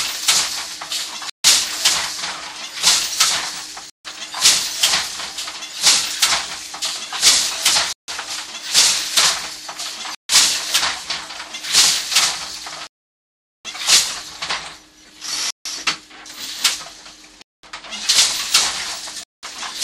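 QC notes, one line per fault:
1.30, 3.90, 7.93, 10.15, 12.87, 15.50, 17.42 and 19.23 s, Bluetooth stall: the sound cuts to silence, then carries on. Most gaps last about 0.15 s, the one at 12.87 s lasts 0.78 s, and those at 17.42 and 19.23 s about 0.2 s. Likely interference delayed packets, so the headphone buffer ran dry until resent data arrived.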